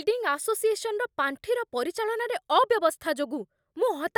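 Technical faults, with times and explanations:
Nothing in the speech stood out as a technical fault on listening.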